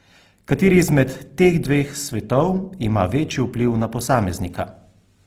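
Throughout, likely Opus compression, fitting about 16 kbps in music mode, fills bit-starved bands by folding and noise, leaving the sound grainy and rough.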